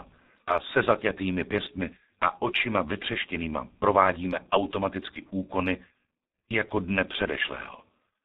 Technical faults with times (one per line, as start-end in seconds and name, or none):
0.00-8.24 G.723.1 codec